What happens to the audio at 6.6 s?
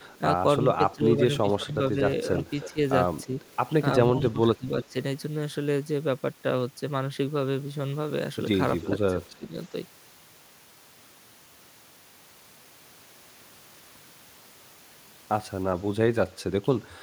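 At 6.6 s the speech continues without any audible dropout, click, distortion or other fault.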